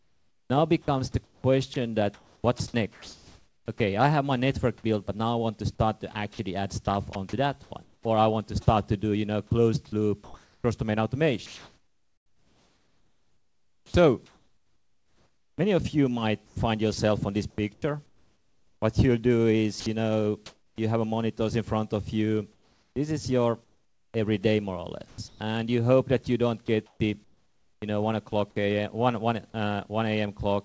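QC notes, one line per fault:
0.00–20.78 s, sound chopped by the voice detector: about 8.1 s of quieter sound swapped for comfort noise, likely from the sender's detector toggling transmission.
22.52–29.54 s, sound chopped by the voice detector: about 2.0 s replaced by synthetic comfort noise, likely the detector cutting transmission repeatedly, leaving choppy edges within the wideband call sound.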